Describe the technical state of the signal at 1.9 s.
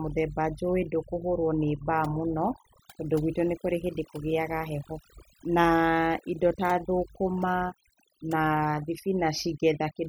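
At 1.9 s the speech carries overdone noise removal, present throughout: bands near the estimated noise are cut away, leaving twinkling near-silence, unlike a gate's whole-signal cutoff.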